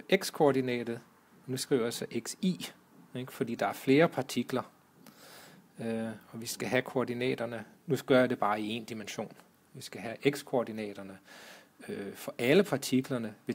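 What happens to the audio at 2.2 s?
Nothing goes wrong at 2.2 s; the audio plays through that moment intact, with no dropout, click, distortion or other fault.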